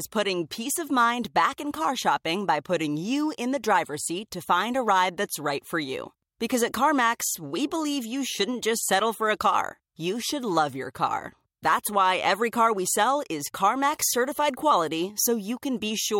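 At 13.47 to 13.49 s, compressed frames are skipped. Roughly one frame of audio, consistent with a 23.2 ms frame length, never plays, so the speech jumps ahead.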